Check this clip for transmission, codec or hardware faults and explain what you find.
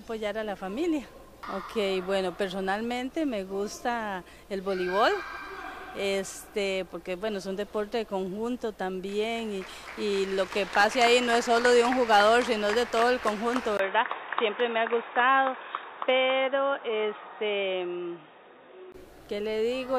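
One fault is present. From 13.77 to 18.94 s, the input likely switched to a poorer device. Nothing above 3.8 kHz passes, so the sound turns dull after a brief gap.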